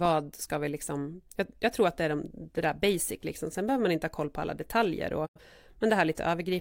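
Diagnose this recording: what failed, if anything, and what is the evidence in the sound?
A digital broadcast dropout at the reception stage: the receiver lost valid frames and muted until good data returned. From 5.25 to 5.40 s the speech fades out over about 20 ms and goes silent, dropping roughly 85 ms of programme, which fits two lost frames.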